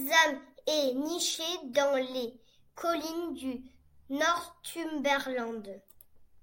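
From 0.18 s to 6.40 s, clock slip clicks run through the speech as faint, evenly spaced ticks about every 0.15 s, some forty in all. Each is likely one sample dropped or repeated as two unsynchronised clocks drift apart by roughly 150 ppm.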